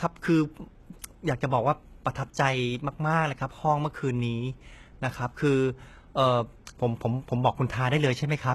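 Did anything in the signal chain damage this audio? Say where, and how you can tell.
Yes. The s sounds come out gritty and lispy across the whole speech clip, and nothing survives above about 12.3 kHz. That points to the codec stage, likely HE-AAC compression at a very low bitrate, around 16 kbps: treble rebuilt by band replication from copied lower bands lacks the original harmonic structure.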